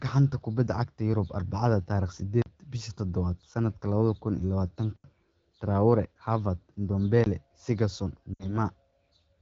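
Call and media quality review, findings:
Block of digital silence at 2.42 s (40 ms), 4.96 s (80 ms) and 7.24 s (20 ms). Hard cut to zero and back. Longest one is a short hole. Probable component: audio output path. Buffer not filled in time.

Lost AMR speech frames at 8.34 to 8.56 s. Sound drops to near silence within two frames, then returns rough. About 60 ms missing, which fits three 20 ms frames. Probable component: radio link. Decoder concealed failed frames with repeated parameters and falling gain. Wideband codec band at about 12.65 kbit/s audible.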